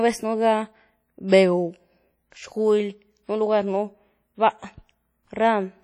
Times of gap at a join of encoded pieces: none

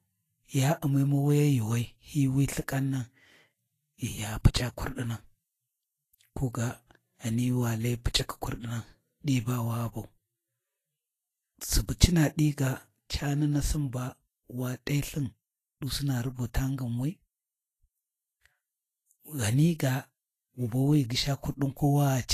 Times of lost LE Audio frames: none

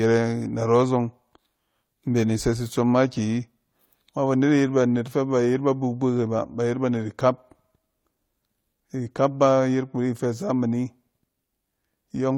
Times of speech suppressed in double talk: none

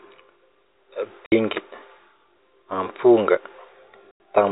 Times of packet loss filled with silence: 1.26-1.32, 4.11-4.20

